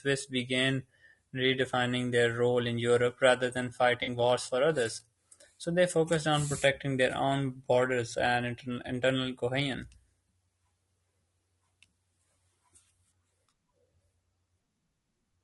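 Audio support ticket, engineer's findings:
Whole clip: speech rough and grainy, noise between harmonics, thin synthetic-sounding top band. Likely low-delay AAC compression (AAC-ELD). Short frames resolve pitch harmonics poorly, and the plainly audible damage points to roughly 32 kbps. Unlike narrowband coding, the damage is granular texture.

4.03 to 4.09 s: smeared, noisy patch between "rather than" and "wars for others". AAC frame loss with concealment. About 40 ms of audio is missing, which fits two lost frames. The decoder rebuilt it from the last good spectrum, so there is a blur instead of silence, a click or a repeat.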